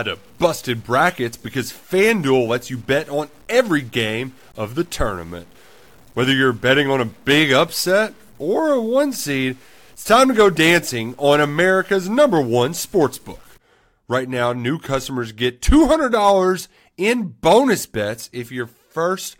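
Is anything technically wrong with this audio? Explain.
Yes. From 0 to 13.58 s the speech is grainy and gritty, its quietest parts dropping out or sputtering, with noise roughly 35 dB down; likely low bit depth without dither, about 8-bit truncation.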